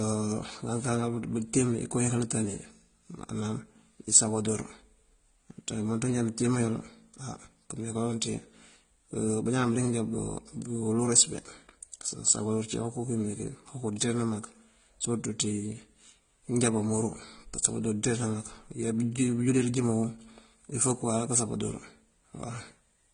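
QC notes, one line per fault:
Throughout, transcoding between lossy codecs: nothing above 9.7 kHz, with the artefacts of different codecs heard together on the speech, fitting a likely low-rate HE-AAC encode re-encoded as AAC-LC near 32 kbit/s.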